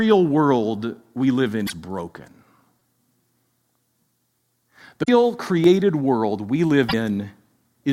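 A speech recording with two kinds of fault. Damaged data in a compressed stream appears three times: at 1.63 to 1.70 s, right after "world we live", at 5.02 to 5.09 s, and at 6.85 to 6.94 s. Each lasts 70 to 80 ms. Corrupt bytes made the decoder misread frames there. It lost sync and hunted for the next valid frame header. The clip also has a repeated buffer fault. At 2.80 to 2.81 s, a piece about 5 ms long plays three extra times with hard joins. That is heard as a quick buzzy stutter. At 5.64 s, one extra repeat gives a single click. New audio arrived late, so the device replayed its last buffer. The 5 ms length fits a 256-sample buffer. Nothing seems lost; the repeats only delay the sound.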